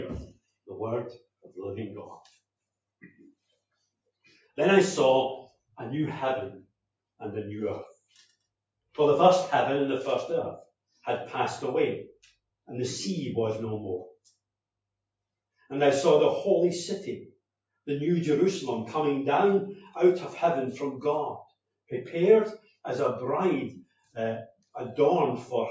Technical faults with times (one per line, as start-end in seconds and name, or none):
23.83-24.16 sound cut by the noise suppressor